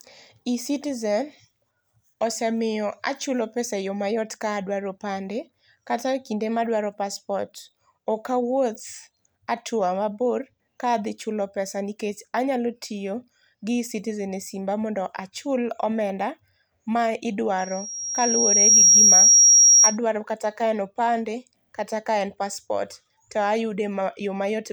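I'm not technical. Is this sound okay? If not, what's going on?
No. From 17.58 to 19.98 s there is a loudspeaker feedback squeal: a microphone picks up its own speaker, and a high 5.6 kHz whistle swells over about a second until it drowns the speech. That swelling sets it apart from a steady interference tone.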